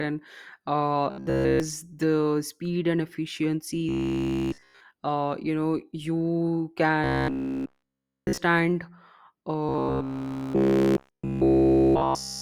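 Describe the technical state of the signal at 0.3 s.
At 0.3 s the speech signal is intact, with no audible fault at that moment.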